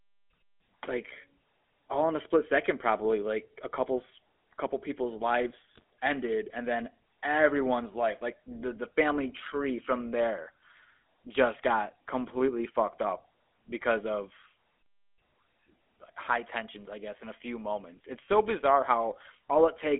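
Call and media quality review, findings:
GSM full-rate codec, throughout. Plainly audible buzzy, gravelly roughness on the speech, band 250 Hz to 3.5 kHz, consistent with 13 kbps full rate. Coarse pulse excitation is the cause, not simple band-limiting, which would only dull the sound without the grit.

GSM bit errors, 5.75 to 5.82 s, between "a couple's couple people's" and "ended and then everyone's". Brief squawk and gargle as corrupted filter, pitch and gain values reach the decoder, pointing to roughly 2% bit errors. The sound is distorted rather than missing or smeared, so this is not packet loss.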